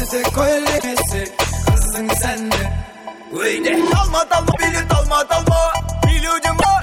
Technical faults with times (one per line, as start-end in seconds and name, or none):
0.75-0.84 damaged data in a compressed stream
4.48-4.58 damaged data in a compressed stream
6.57-6.66 damaged data in a compressed stream